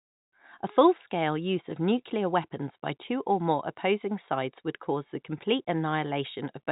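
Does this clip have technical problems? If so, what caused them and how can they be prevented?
No, no technical faults detected.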